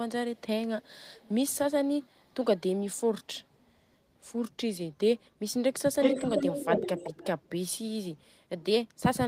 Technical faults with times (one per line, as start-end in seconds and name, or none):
0.34-0.42 echo leak
0.81-1.31 echo leak
2.26-2.32 echo leak
6.01-7.49 echo leak